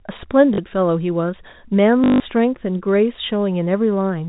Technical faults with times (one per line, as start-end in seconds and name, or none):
0.54-0.58 packet loss with last packet repeated
2.04-2.20 packet loss with last packet repeated